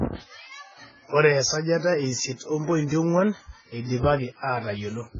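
It's a speech recording with heavy AAC compression damage throughout: nothing above 7.5 kHz, dull smeared tone, warbly sibilants, likely AAC-LC at a very low bitrate, around 12 kbps.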